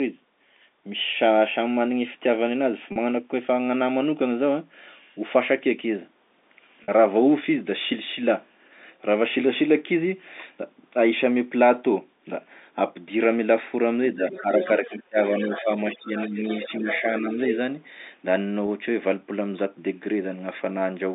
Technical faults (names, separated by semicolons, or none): packet loss with pitch repetition; speech suppressed in double talk; other side's voice leaking through